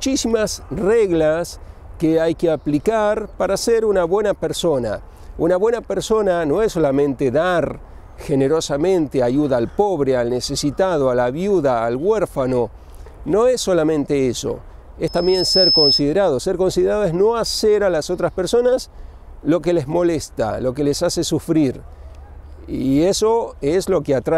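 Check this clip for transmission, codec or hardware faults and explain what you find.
One fault is present: a loudspeaker feedback squeal from 15.07 to 16.03 s. The microphone picked up the loudspeaker it was feeding, and at about 5.2 kHz the loop gain exceeded one, so that frequency kept reinforcing itself. A piercing tone swells over roughly half a second until it sits a few decibels above the sound, then stops.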